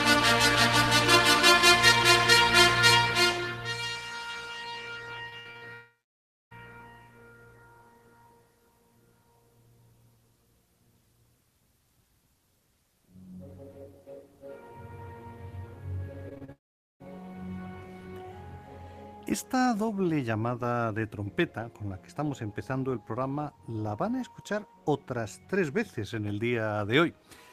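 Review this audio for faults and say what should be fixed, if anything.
Repeated packet loss (robotic sound) hits twice. From 5.29 to 5.64 s, four packets went missing or arrived late, the longest gap 53 ms. From 16.29 to 16.50 s there were four more, the longest 34 ms. Each time the receiver patched the holes by extending the last sound, covering close to half of each stretch, so the audio turns choppy with pieces missing. A larger jitter buffer with forward error correction would prevent this.

A long network dropout follows each burst. Audio is missing for about 0.78 s from 5.74 to 6.53 s, with about 0.64 s of near-silence, and again for about 0.48 s from 16.52 to 17.02 s, with about 0.44 s silent. The likely cause is a network stall. The concealment buzz fades quickly to silence, and the sound resumes with that span simply gone. A more stable connection, or redundant transmission over a second path, would prevent this.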